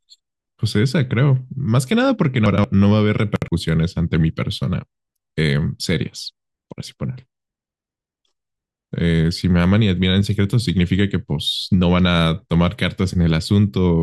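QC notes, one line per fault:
2.46–2.64 s and 3.36–3.48 s: chunks out of order. At 2.46 s, a 60 ms piece of speech plays two chunks late, after audio meant to follow it. At 3.36 s, one plays a chunk late. Nothing is missing, but each spot sounds jumbled, with three hard joins.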